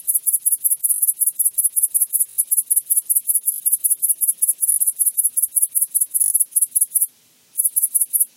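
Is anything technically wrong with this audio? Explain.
Yes. Repeated buffer at 0.94, 2.3, 3.52, 4.72 and 6.24 s: when fresh audio arrived late, the device replayed its last short block three or four times, which fits a 20 ms buffer. Each event is a brief buzzy stutter with hard joins, and around 70 ms of sound is lost.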